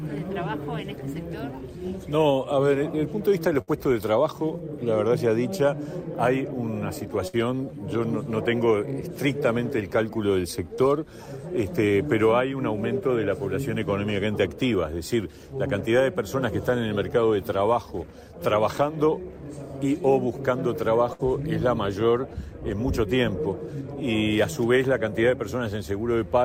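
Burst of packet loss at 3.61 to 3.70 s, 7.27 to 7.36 s and 21.13 to 21.22 s: each time about 60 ms of packets never arrived. The receiver stretched the last sound into a fading buzz or hiss, then the audio resumes with that stretch gone.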